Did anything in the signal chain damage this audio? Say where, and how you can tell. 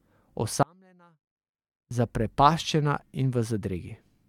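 Yes. From 0.63 to 1.91 s the speech abruptly drops to a faint residue roughly 35 dB down for 1.28 s: an audio dropout, likely an intermittent analogue connection upstream of a live input.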